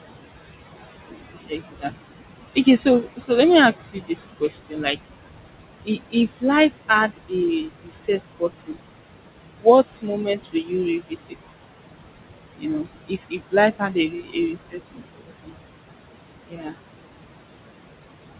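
Throughout the clip a noise suppressor pulls down whatever bands it judges to be steady noise by about 20 dB, frame by frame. The room noise, sitting about 11 dB under the speech, drops away between phrases and surfaces beneath them.

The same suppressor also mistakes parts of the speech for noise. It turns them down by about 16 to 22 dB at 1.47–2.13 s, 2.55–3.3 s (just before "let me ask"), 3.93–4.97 s (just after it), 5.85–7.33 s, 7.65–8.79 s, 9.61–11.52 s, 12.58–15.55 s and 16.46–16.77 s. In these stretches soft consonants and endings sound swallowed or faint, most extensively in the long 12.58–15.55 s stretch. The narrow band, with nothing above 4 kHz, fits a G.711 mu-law call path.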